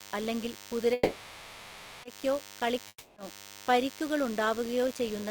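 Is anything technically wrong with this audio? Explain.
Yes. A DECT cordless phone buzz runs through the whole speech clip, and the call audio stalls twice.

Throughout, a thin, steady buzz sits about 20 dB below the speech. A nearby DECT handset or base transmits a short radio burst every 10 ms, and the audio circuitry rectifies it into a 100 Hz tone rich in harmonics. On a spectrogram this shows as evenly spaced horizontal lines at 100 Hz and its multiples, unbroken from start to end, even under pauses.

From 0.93 to 2.05 s, there is a call audio freeze. The speech halts and the last sound is stretched into a fading buzzy hiss for about 1.1 s. The speech then resumes exactly where it stopped, with nothing skipped. The likely cause is packets held up in transit, which left the jitter buffer empty. On a spectrogram, the harmonic pattern just before 0.93 s smears into a blurred, decaying band. 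The waveform shows a tapering tail rather than a hard cut.

From 2.88 to 3.18 s, a long network dropout, likely from packets that never arrived, removes about 280 ms of speech. The final sound is extended as a brief fading buzz, then about 40 ms of near silence follows, before the speech jumps ahead at "പരിക്കുകൾ ഉണ്ടാവുകയോ ചെയ്യുന്ന". The waveform shows a decaying tail and a short flat gap. The spectrogram shows smeared energy ending in a blank strip, then an abrupt restart mid-phrase.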